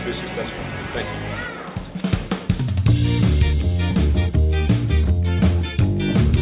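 No technical faults can be heard at any point in the audio.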